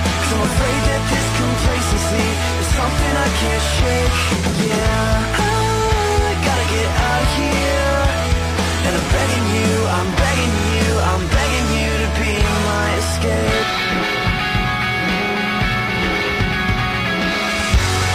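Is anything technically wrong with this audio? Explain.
Yes. There are repeated frames from about 10.55 to 10.65 s. A single block of about 46 ms, which points to one compressed frame, was written into the stream more than once, so the decoder plays it twice more in a row. The result is a brief mechanical stutter that lengthens the audio by about 93 ms. Unlike a dropout, nothing goes missing, and unlike a gap, there is no silence: the same fragment simply recurs.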